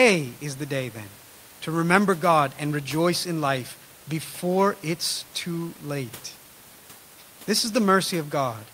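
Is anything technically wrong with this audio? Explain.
No, nothing technically wrong.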